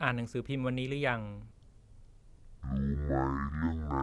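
Wrong sample rate affects this speech clip from 1.51 s to the end. From that point the audio is played back at half the rate it was recorded at, with no conversion, so everything runs at 0.5 times speed and drops 12 semitones, a full octave. The voice turns low, slow and dragging, which fits 48 kHz material being played out at 24 kHz.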